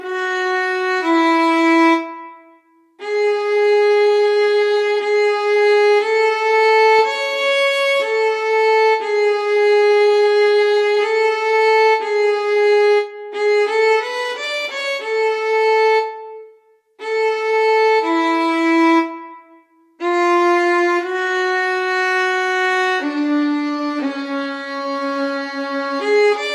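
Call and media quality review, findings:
Nothing stood out on listening, so there is no finding to raise for this clip.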